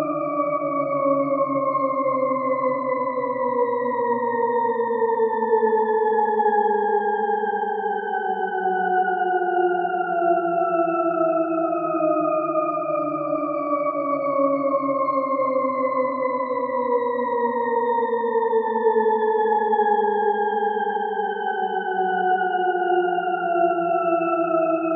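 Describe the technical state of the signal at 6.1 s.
At 6.1 s the signal is intact, with no audible dropout, distortion, glitch or other fault in the sound at that point.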